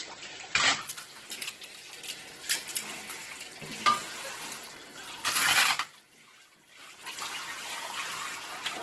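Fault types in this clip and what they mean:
Opus compression: heavy damage, most likely from Opus in its CELT music mode at a very low rate, around 12 kbps. Band energies are kept but detail gets filled in, so the sound turns grainy and rough. Nothing is heard above about 12.1 kHz, and that applies all through.
Periodic USB or driver dropouts: from 3.76 s to 8.77 s, tiny gaps of silence land every 0.1 s, roughly fifty of them and each only a fraction of a millisecond long. You hear them as a steady ticking that runs under the sound.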